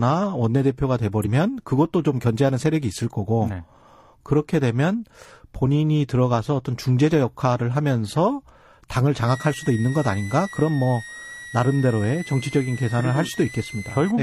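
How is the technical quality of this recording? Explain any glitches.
Two faults are audible in this speech recording: a brief skip early on, and a whistle that runs through most of the last five seconds.

Compressed frames skipped, at 1.22 to 1.27 s. About one compressed frame of roughly 40 ms never reaches playback, either because it is missing from the stream or because the decoder rejected it as corrupt. The frame length works out near 42.7 ms, so the speech jumps forward by that much.

Switching supply whistle, from 9.28 s to 14.11 s. A thin high tone around 2 kHz sits roughly 15 dB below the speech. Its pitch wanders between about 1.8 kHz and 2.1 kHz. That behaviour points to a switching power supply dropping into an audible burst mode or beating against another supply. The oscillation frequency moves with the load, and the tone's pitch drifts or steps along with it.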